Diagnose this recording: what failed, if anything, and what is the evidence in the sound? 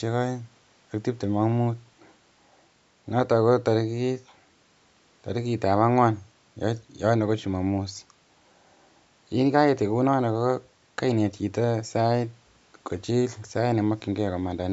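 Nothing in the speech points to a failure at any stage; it carries the normal imprint of call microphone processing, with the lowest bass trimmed by its high-pass filter and no content above 8 kHz.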